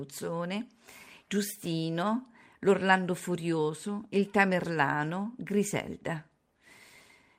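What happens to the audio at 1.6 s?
At 1.6 s the speech carries on intact, with no dropout, click, distortion or other fault at that point.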